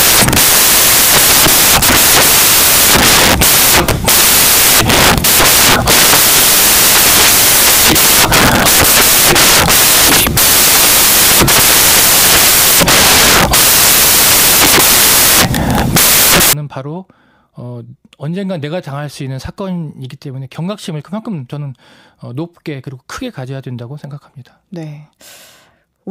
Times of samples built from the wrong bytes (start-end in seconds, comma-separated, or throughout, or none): 0.00-16.53